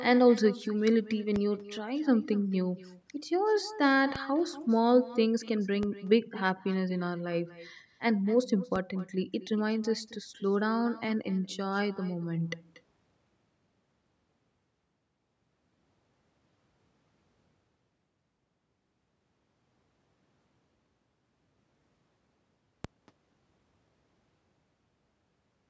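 From the start, every phrase is trailed by a fainter, thinner copy about a fifth of a second later and about 18 dB down. This is echo with no canceller: the far end's loudspeaker feeds its microphone and the return is never removed. Low thumps land at 1.36, 4.16, 5.83, 8.76 and 22.85 s while the speech carries on unchanged. Each is a DC step, a sudden jump in the waveform's zero line that then dies away through a 20 Hz high-pass filter.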